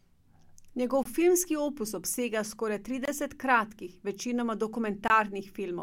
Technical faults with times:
1.03-1.05 gap between chunks
3.05-3.08 gap between chunks
5.08-5.10 gap between chunks

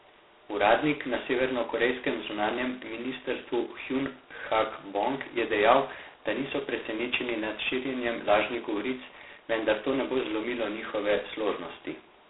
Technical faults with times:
0.00-12.30 G.726 ADPCM

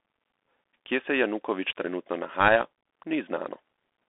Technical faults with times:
0.00-4.08 Bluetooth CVSD headset codec

